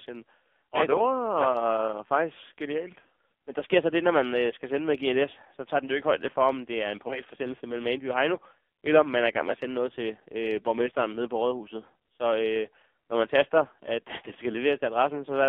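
Speech passes through the AMR narrowband mobile codec at a low rate, which fits the 5.9 kbps mode. Only about 250 Hz to 3.5 kHz survives, and the voice sounds heavily buzzy and synthetic. From 7.08 to 7.22 s there are lost AMR speech frames, which sounds like one missing 20 ms frame. The decoder conceals it by reusing the previous settings, which causes a brief dip or warble before the voice returns weak or rough for a moment.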